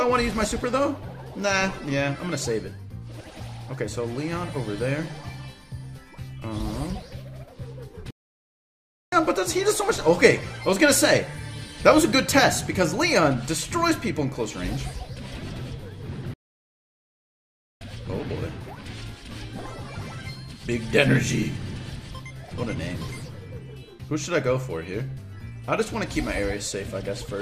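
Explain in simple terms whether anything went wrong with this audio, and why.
Twice the sound cuts out completely in mid-flow and then carries on: first from 8.11 to 9.12 s, a gap of about one second, and again from 16.34 to 17.81 s, about one and a half seconds. These are playback stalls. The player was likely starved of audio data or briefly held up by something else on the system, so it went silent until it could catch up and resume.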